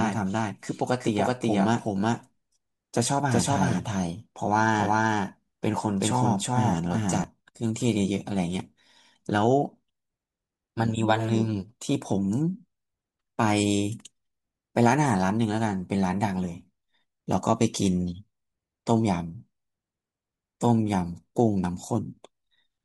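The audio was likely captured twice, perhaps by a second, slower path or an edit that left two copies out of step, so this speech clip carries a doubled audio track from the very start until 7.24 s. A second full-band copy trails the first by roughly 400 ms at about the same level, so every sound is heard twice in close succession, with no decay or room colour on the repeat, and the copy cuts out abruptly at 7.24 s.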